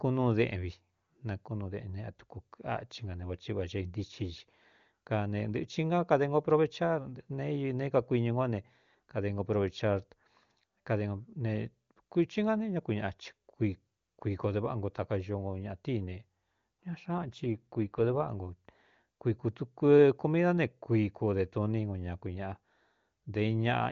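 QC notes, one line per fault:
17.18 to 18.30 s, AMR rate drop: for about a second the speech goes rougher and more synthetic, with no gap and no change in bandwidth. That fits the HD Voice link stepping down from around 23.85 to about 8.85 kbit/s, trading bits for error protection.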